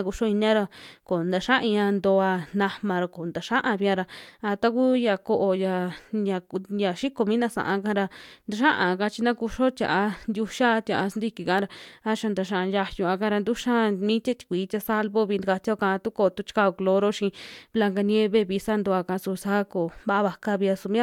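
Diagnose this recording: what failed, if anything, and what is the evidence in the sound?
Nothing in the signal chain appears to have failed: the speech arrives as a continuous, steady signal with no audible disruption from any stage between capture and playback.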